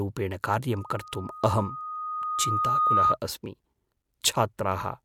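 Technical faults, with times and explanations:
0.72–3.17 s, loudspeaker feedback squeal: a single 1.2 kHz tone swells over roughly two seconds to about 10 dB above the speech, as the microphone-speaker loop's gain at that frequency exceeds one. The gradual self-growing rise distinguishes it from a steady interfering tone.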